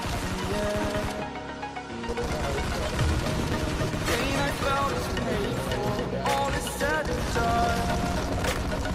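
From 3.53 s to 5.43 s there is a call bitrate drop. The sound turns rough, watery or muffled, which points to the encoder being given far fewer bits, consistent with a fall from about 64 kbps to about 22 kbps, where it stays for about 1.84 s. It then clears once the rate recovers. On a spectrogram that stretch looks coarser and blotchier, with fine detail smeared. The waveform envelope shows little change.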